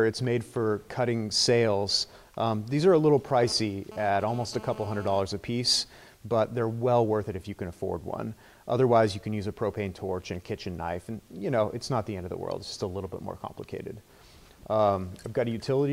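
A 2G phone close to the recording chain was transmitting in bursts, and the audio circuitry rectified those radio pulses into the signal path, producing GSM phone buzz from 3.28 to 5.21 s. The bursts repeat at 217 Hz, so the buzz is a hard, raspy tone at that pitch, rich in harmonics and unrelated to the sound itself, sitting about 18 dB below it. Because the phone was moving data rather than holding a call, the buzz stutters on and off.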